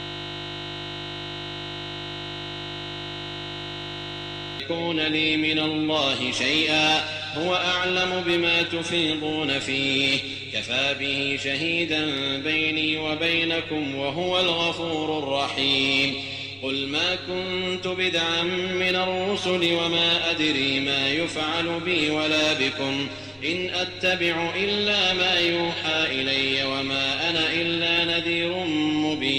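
From the first instant until 4.60 s, the audio is a steady buzz at 50 Hz instead of moving sound. The system hang loop is already under way when the clip begins. A single 20 ms slice of audio repeats exactly, roughly 230 times. This happens when the computer or driver stalls while the sound hardware keeps replaying the same ring buffer. A loop that short repeats too quickly to hear as a stutter, so it fuses into a tone at the loop rate.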